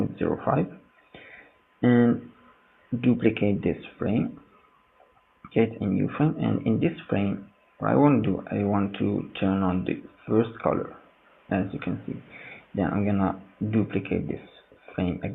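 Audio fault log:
Nothing to log here; I listened all the way along and didn't hear anything go wrong.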